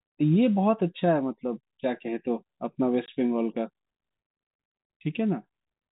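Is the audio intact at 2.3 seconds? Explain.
Yes, at 2.3 seconds the speech is intact, with nothing breaking or disturbing it at that moment.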